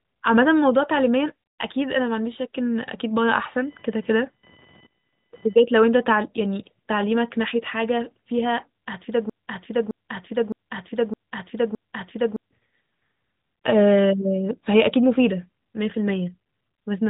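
From 3.55 to 5.55 s, computer activity noise appears: a faint buzz around 1 kHz, about 30 dB below the speech, that follows machine load rather than the talker.

From 9.30 to 12.51 s, a broken-record loop replays one 0.61 s fragment exactly five times, likely a stalled stream. The missing audio never returns, unlike a brief stutter.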